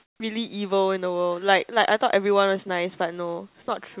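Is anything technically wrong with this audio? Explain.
Yes. From 0.0 to 0.2 s, the opening background is comfort noise in place of the background. It sounds steady and featureless, about 2 dB quieter than the real background. The likely cause is discontinuous transmission. The sender paused during silence, and the receiver filled the gap with synthetic noise. The call path's band limit is also audible, with nothing above 4 kHz.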